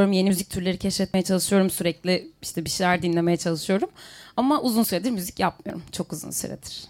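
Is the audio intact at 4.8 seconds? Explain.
No. At 4.84 s the speech gives an abrupt jump, as though a sliver of sound has been skipped with no gap of silence in between, roughly 20 ms missing. The likely cause is a dropped buffer (overrun): the recording program failed to read its samples before the hardware wrote over them, so that stretch was lost and the audio on either side was spliced directly together, producing the discontinuity.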